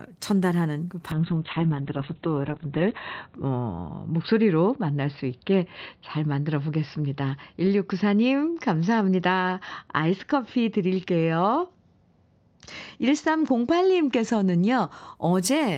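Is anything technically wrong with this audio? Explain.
Yes, there is a call bitrate drop. From 1.15 s to 15.21 s the call's bandwidth estimate falls and the Opus encoder is forced to code the speech far more coarsely. At its worst, lasting about 1.85 s, the sound fits a drop from roughly 32 kbps to 6 kbps. Speech turns rough, watery and muffled. On a spectrogram, energy above 4 kHz disappears where it had reached 20 kHz, leaving a hard ceiling with smeared, blocky detail below it.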